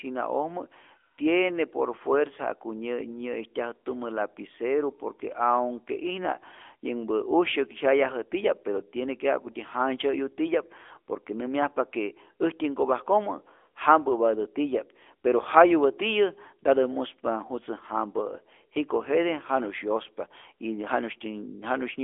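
Throughout, the speech sounds thin, boxy and plainly buzzy, with nothing above 3.7 kHz. This is the AMR narrowband mobile codec, apparently at a mid-rate mode near 10 kbps.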